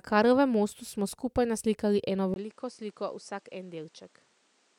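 Speech recording where the input likely switched to a poorer device at 2.34 s, just after "smo skupaj naslikali eno": a 20 ms gap, then duller sound capped near 10.1 kHz, roughly 10 dB quieter, with new background noise.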